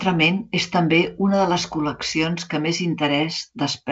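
Speech over G.722 wideband telephone coding at 56 kbit/s shows no faults, only the light codec damage that rate implies and no content above about 7.9 kHz.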